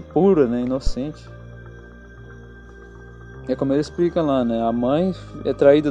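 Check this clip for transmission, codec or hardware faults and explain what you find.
One hardware fault is audible: a phantom power thump from 0.87 to 0.93 s. It lands as a short, deep thud peaking at about -8 dBFS and dying away within roughly 15 ms. It comes from a supply being switched on a live input, whose voltage step passes through the coupling capacitors.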